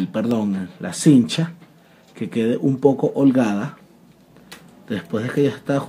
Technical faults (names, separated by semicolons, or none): electrical switching spike